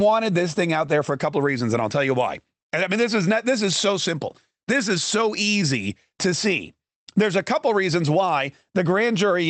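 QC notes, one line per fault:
Throughout: clock drift between sender and receiver. The sending end's audio clock runs fast, by around 4 percent, so samples arrive quicker than the receiver plays them out. The jitter buffer keeps filling, and the receiver has to discard material to hold its latency down. Across the speech this gives a faint, recurring unevenness in pacing rather than any single obvious glitch, heard through the band limit near 8 kHz of the Opus call path.
0.24–9.32 s: repeated timing corrections. To keep up with the fast sender, the receiver repeatedly cuts short fragments out of the speech, always shortening, never stretching. The net effect is playback at 104 percent of the original rate. The cuts are small and land at uneven intervals, so they come across as slight hiccups and a subtly hurried, unsteady tempo rather than clean dropouts. The spacing tracks the buffer creeping full and being trimmed back.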